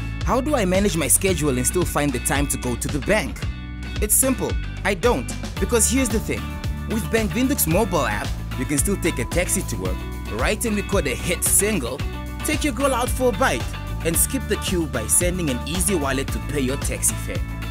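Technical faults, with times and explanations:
No technical faults are audible anywhere in this clip.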